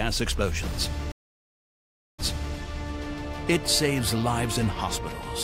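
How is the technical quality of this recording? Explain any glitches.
The recording has one clear glitch, a stream reconnect between 1.12 s and 2.56 s. The network connection dropped, so the player stopped receiving data, then re-established the link and started a new decoder partway through the stream. The sound goes silent for about 1.07 s, and when it returns it has jumped back about 0.37 s. The server resent recent material, so a short stretch from just before the dropout is heard a second time.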